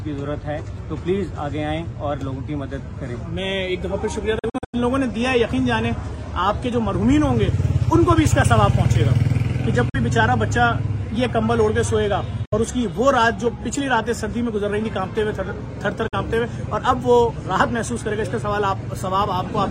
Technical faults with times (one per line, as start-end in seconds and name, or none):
4.39-4.75 Bluetooth dropout
9.89-9.96 Bluetooth dropout
12.45-12.54 Bluetooth dropout
16.08-16.14 Bluetooth dropout